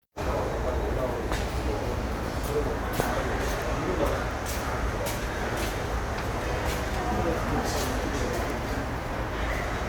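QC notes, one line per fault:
No faults heard anywhere in the audio.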